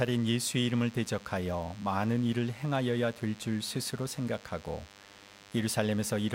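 A speech recording carrying DECT cordless phone buzz from start to finish: a thin, steady buzz sitting roughly 25 dB below the speech and repeating at 100 Hz, rich in harmonics that give it a rasping edge. A nearby DECT handset or base station transmits a short radio burst every 10 ms, and somewhere in the audio path a circuit rectifies that burst, turning the pulsing RF envelope into an audible 100 Hz tone.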